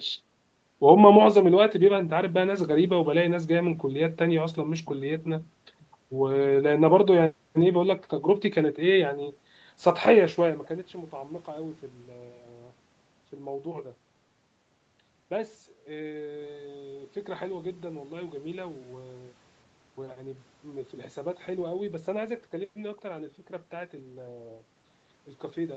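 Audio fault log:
No technical faults heard.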